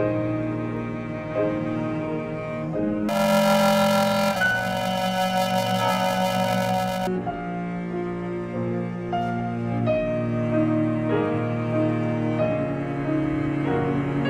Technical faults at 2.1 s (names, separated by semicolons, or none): none